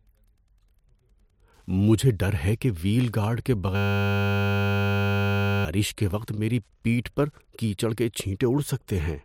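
Throughout, Wi-Fi interference adds faint ticking every 102.4 ms, far below the speech, about ten evenly spaced ticks per second, too regular for random clicks. From 3.76 to 5.65 s, a system hang loop replays one 10 ms slice 189 times, a steady 100 Hz buzz, not a stutter, and about two seconds of speech are lost.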